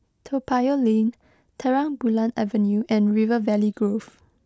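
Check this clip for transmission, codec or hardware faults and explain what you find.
No transmission, codec or hardware faults are audible here.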